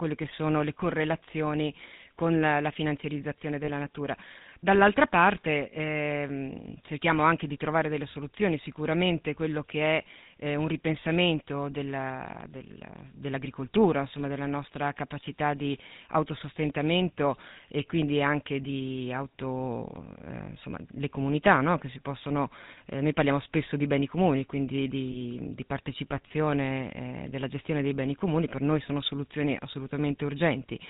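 Italian speech with plainly audible GSM full-rate codec damage from start to finish. The voice has the buzzy, gravelly roughness of a vocal-tract model driven by a sparse pulse train, and nothing above 4 kHz survives, so sibilants and breath are dull and clipped off. The coarse texture fits the 13 kbps full-rate coder rather than a later GSM variant. Three short lost GSM frames break through this. The first runs from 3.64 to 3.70 s, just after "con la la finanziarizzazione", lasting about 40 ms, consistent with two consecutive frames. The second, at 12.32 to 12.35 s, lasts 20 ms. The third, at 25.12 to 25.17 s, falls between "beni comuni quindi di" and "di partecipazione eh della" and is also about one frame long. In each gap the decoder holds the last good frame's parameters, giving a brief rough, metallic ring in place of the missing sound.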